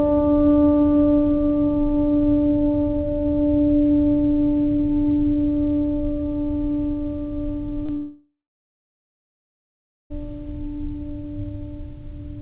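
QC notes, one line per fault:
7.86–7.91 s, short concealed packet loss: About 20 ms of the stream arrived too late for the decoder, so the receiver bridged a 25 ms hole by extending the music it had just played and then crossfading back into the real signal. The repair is heard as a brief smear or wobble in the music. Any short attack landing in that gap is softened or lost, because the patch only carries forward what came before it.
7.97–10.12 s, long network dropout: About 2.14 s of audio never arrived, likely from a stall in the network connection. The receiver at first kept extending the last sound, heard as a fading buzz or hiss, but concealment cannot be sustained, so for roughly the final 1.8 s of the gap there is only silence. The music then resumes at 10.12 s with that stretch missing. Across the clip the sound stops at 4 kHz, which fits a G.711 mu-law call path.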